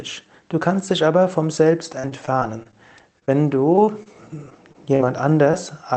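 From 1.99 s to 5.55 s the audio breaks up with repeated packet loss (robotic sound): fifteen short holes, none longer than about 39 ms, each patched by stretching the preceding sound, which leaves a choppy texture. A single dropout would give one isolated gap, but here the holes recur close together across the whole stretch. Above about 8 kHz the sound is missing, consistent with a low-bitrate Opus call path.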